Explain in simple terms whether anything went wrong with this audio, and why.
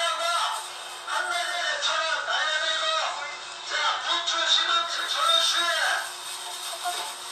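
Something did go wrong, from 1.34 s to 5.17 s. This is digital radio blending to analogue. The receiver lost its digital signal and faded over about a third of a second to the FM broadcast. A faint hiss appears. Then it fades back.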